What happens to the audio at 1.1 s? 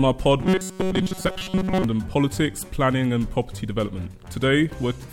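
At 1.1 s the audio is in the middle of robotic sound from repeated short buffers, running from 0.40 to 1.84 s. It has a rigid, metallic buzz at 188 Hz, likely from a roughly 5.3 ms buffer being replayed while most of the real audio is skipped.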